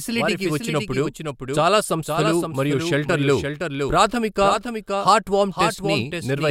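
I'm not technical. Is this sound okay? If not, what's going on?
No, it's got a doubled audio track: the whole speech clip plays twice, with a second copy trailing about half a second behind and a bit quieter, like a flat, dry echo. That's likely from the sound being recorded a second time through a slower path.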